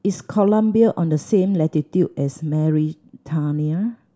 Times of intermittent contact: none

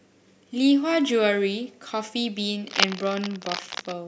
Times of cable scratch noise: 2.68-3.94

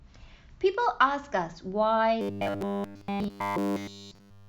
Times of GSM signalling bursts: none

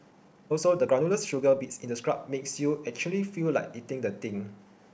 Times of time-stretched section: 0.00-2.16

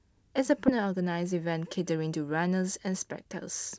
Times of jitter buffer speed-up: 0.78-2.13

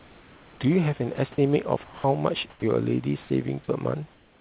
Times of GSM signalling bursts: none

